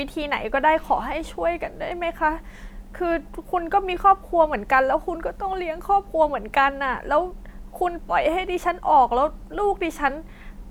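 Listening to this speech recording, nothing technical stood out as wrong at any point.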